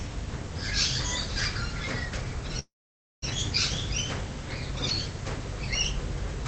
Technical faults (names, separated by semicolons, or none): call audio freeze